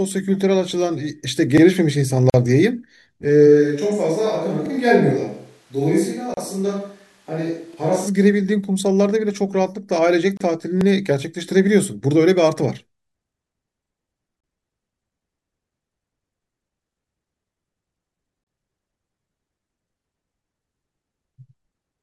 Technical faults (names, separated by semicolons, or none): overlapping chunks; gap at a join of encoded pieces; switch to a distant microphone